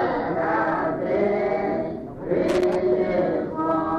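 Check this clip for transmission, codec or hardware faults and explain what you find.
One hardware fault is present: loose connector crackle, from 2.49 s to 2.75 s, roughly a quarter of a second. A worn or dirty contact in the signal path is making and breaking as it shifts, so the audio is chopped on and off many times in quick succession, with pops where any DC on the line jumps. It sounds like an irregular scratchy burst. Unlike a digital dropout, which leaves clean gaps or evenly spaced clicks, this crackle is ragged and uneven.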